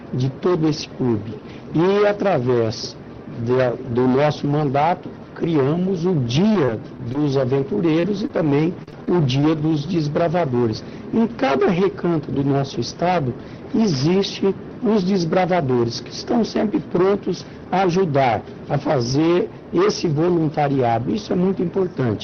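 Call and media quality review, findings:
Hard clipping, throughout: peaks flattened by about 14 dB of overdrive, with roughly a sixth of samples over the limit. Likely an input gain or capture stage overload; the squared-off tops add harsh high harmonics, heard as fuzz on every loud passage.

Repeated packet loss (robotic sound), 6.52 to 7.15 s: four gaps in quick succession, longest 23 ms, about 70 ms missing. Probable network or jitter-buffer underrun. The receiver's concealment stretches the last audio into each hole, giving a choppy texture with pieces missing.

Scattered short gaps, 7.62 to 9.59 s: roughly seven isolated dropouts, the longest around 40 ms, about 130 ms lost in total. Intermittent late or lost packets, each patched by continuing prior audio, producing brief hiccups and smears. The Opus call path limits the band to 6 kHz throughout.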